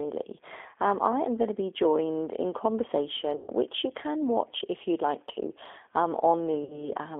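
Speech, squeezed through what sounds like a G.729 codec at 8 kbit/s: the band stops at roughly 300 Hz to 3.5 kHz, and the low-rate rebuilding of the voice gives it a plainly rough, slightly synthetic edge. There are two spots of VoIP packet loss concealed by the speech codec. From 3.36 to 3.50 s, just before "you can watch if", about 120 ms of audio goes missing, which fits four dropped packets. From 6.64 to 6.90 s, right after "you'd like to um", about 60 ms is lost, which fits two. Both times the decoder keeps stretching its last pitch and filter into a fading buzzy tone or coloured noise, and the voice stays weak or distorted for a moment after the packets come back.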